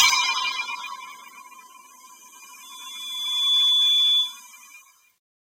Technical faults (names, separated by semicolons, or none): loudspeaker feedback squeal